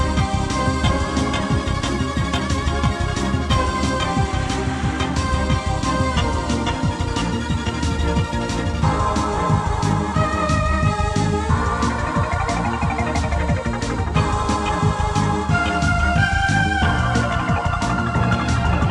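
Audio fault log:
Nothing in the way of a technical problem turns up anywhere in this one, so there's nothing to log.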